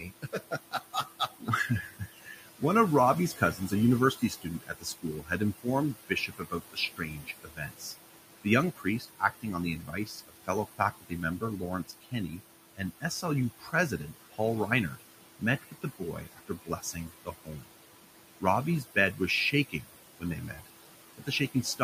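Noise suppressor artifacts run through the whole clip. The suppressor pulls down whatever bands it judges to be steady background by about 17 dB, deciding anew on every short frame. The room noise, which sits about 12 dB below the speech, therefore drops away in the gaps and swells back under each phrase.

Speech cut by the noise suppressor occurs in four stretches: 0.0 to 2.62 s, 3.36 to 7.85 s, 8.43 to 17.71 s, and 18.4 to 21.84 s. In each, the suppressor mistook parts of the speech for noise and turned them down along with the background, by about 16, 17, 19 and 18 dB at the deepest points. The affected moments add up to roughly a second, a second and a half, and three seconds in the first three stretches. Soft consonants and word endings sound swallowed or faint.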